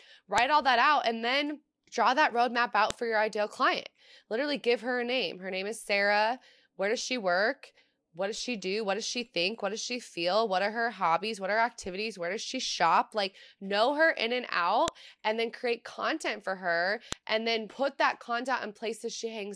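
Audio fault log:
0.38 s, 2.90 s, 14.88 s, 17.13 s: file header played as audio. Sharp, loud snaps before "all that out and", between "then draw that roadmap" and "for your ideal client", and after "know her in and". These are WAV header bytes decoded as samples where pieces join. Unlike clipping or dropout clicks, each snap is brief and fixed, whatever the speech is doing.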